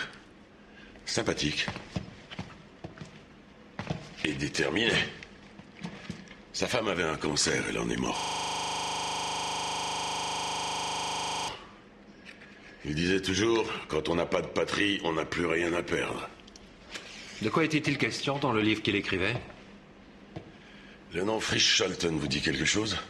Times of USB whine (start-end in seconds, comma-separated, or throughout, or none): none